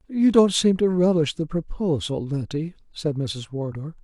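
No technical faults can be heard anywhere in this speech recording. There is no moment in the audio that calls for comment.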